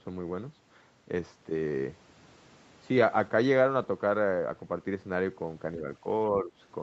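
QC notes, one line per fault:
6.01–6.05 s and 6.29–6.52 s, speech suppressed in double talk: the echo canceller likely mistook the near talker for loudspeaker echo while both sides spoke and turned the signal down. The speech dips by about 5 dB in the brief first instance and about 10 dB across the longer second.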